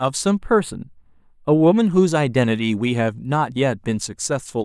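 From 0.38 s to 1.77 s, one channel runs a tiny fraction of a millisecond behind the other, which fits a delay of about two samples, and the pair is folded down to mono. That misalignment produces channel delay (comb filtering): the two copies of the speech cancel where they arrive out of phase, cutting a deep notch near 7 kHz. The speech turns hollow and phasey until the channels realign.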